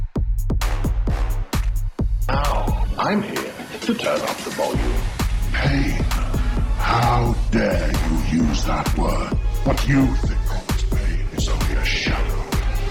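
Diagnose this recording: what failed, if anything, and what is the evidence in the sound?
Nothing failed, and the sound gives no evidence of any fault.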